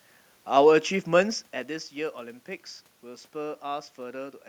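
No technical faults can be heard in this speech clip.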